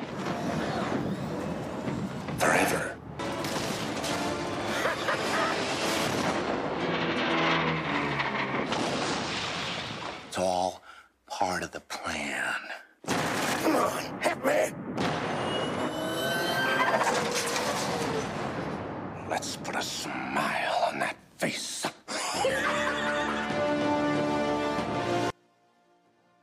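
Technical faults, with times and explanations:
25.30–26.42 s, one channel inverted: summed level falls by about 37 dB, likely reversed polarity cancelling shared content; the waveform collapses and the spectrogram turns nearly blank.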